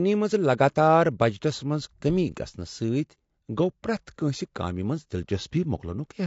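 The speech was likely encoded with low-delay AAC compression (AAC-ELD), at a bitrate that sounds near 32 kbps. At this low bitrate, the voice sounds plainly rough and grainy from start to finish, with noise filling the gaps between harmonics.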